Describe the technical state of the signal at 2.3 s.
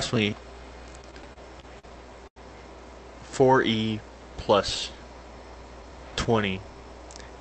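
A short stall from a late packet runs from 2.27 to 2.38 s. The jitter buffer ran dry, so the receiver stretched the last sound for 88 ms, with a buzz or dip, then resumed exactly where it stopped. Unlike a loss concealment gap, nothing is skipped; everything afterward arrives 88 ms later.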